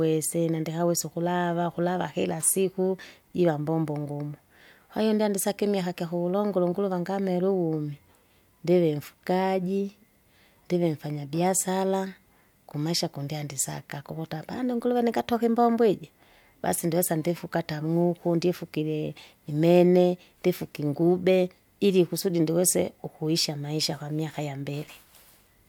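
No technical faults can be heard anywhere in the speech signal.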